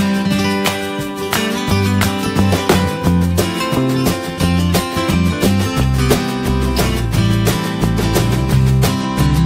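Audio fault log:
9.01–9.45 s, Bluetooth SBC bit pool drop: over the final half second the treble falls away and a gritty, granular noise rises under the sound, lasting to the end of the clip. This fits the encoder cutting its bit pool from around 28 to around 13, near 102 kbps. With so few bits the upper sub-bands get little or no allocation, and the lower ones are quantised coarsely, producing the dull top and the grain.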